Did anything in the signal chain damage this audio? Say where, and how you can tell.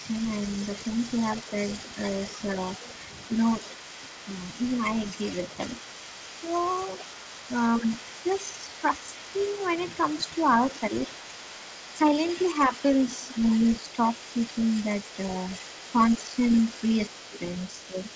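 Yes. The talker's level dips in short bursts, about 5 dB at most between 0.0 and 4.49 s and from 12.68 to 14.34 s, and deeper, about 10 dB, from 6.41 to 11.08 s and 15.93 to 17.99 s. This is likely speech suppressed in double talk: the call processing's echo canceller ducks both voices when the two sides overlap.

A second, fainter voice runs under the talker for the whole clip, about 20 dB down. This is likely the other side's voice leaking through: the far end played over the loudspeaker, and the echo canceller in the call-processing stage left residual echo in the microphone signal.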